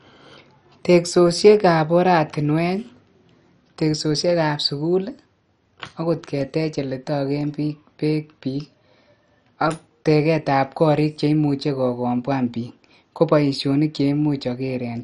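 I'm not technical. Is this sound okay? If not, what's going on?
No. Throughout the clip the speech was likely squeezed too hard by MP2 compression, which cuts the sound into slices and drops the top ones when space runs short. Nothing survives above about 11 kHz, so it sounds dull, with a gurgling, grainy edge.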